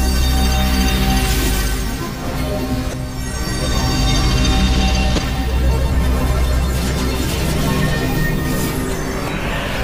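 Damaged data in a compressed stream shows up three times in the audio, at 2.90 to 2.93 s, 5.15 to 5.18 s and 9.25 to 9.28 s, each a short glitch of about 30 ms. Bytes in the encoded file were lost or overwritten at those points, so the decoder misread the affected frames, lost sync and skipped ahead to the next valid frame header, leaving a brief glitch.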